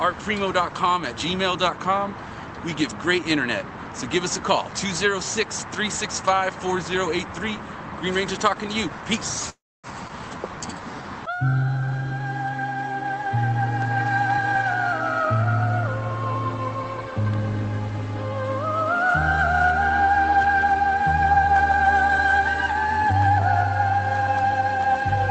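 Call audio freeze at 9.49 to 9.87 s: the sound stops and a gap of 343 ms is inserted, most of it (about 270 ms) silent after a brief fading continuation of the last sound. The likely cause is packets held up in transit, emptying the jitter buffer so the receiver had nothing new to play. When delivery resumed, playback picked up exactly where it had stopped, so nothing is lost. The whole stream is simply pushed later by that 343 ms.

Skip ahead at 10.08 to 10.12 s: about 0.2 s after the freeze, roughly a tenth of a second of audio is dropped and the two sides are spliced together with just a 14 ms fill. Having fallen behind, the buffer likely held a backlog and discarded a stretch to recover some of the delay. The result is an abrupt jump forward, with material missing at the seam.

Jitter buffer slow-down from 10.38 to 11.03 s: the receiver, with its reserve running low, repeated single pitch periods and fragments of pauses over and over to stretch the audio. 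That adds 112 ms, so the passage plays at about 84% speed without any change in pitch. It comes across as drawn-out, sluggish sound, possibly with a slight warble where the same small cycle is repeated many times.

Jitter buffer speed-up occurs four times: 14.29 to 15.50 s at 107% speed, 16.84 to 17.41 s at 112%, 20.03 to 21.46 s at 103%, and 24.20 s to the end at 107%. Each time the buffer held more than its target, so the receiver cut out short pieces of one or a few pitch periods in succession. It removed roughly 100, 70, 50 and 100 ms respectively. Pitch stays the same, and the sound is hurried in all but the 103% stretch, most noticeably in the 112% stretch. All of this sits on top of the call codec's coding noise and its upper frequency limit of 8 kHz.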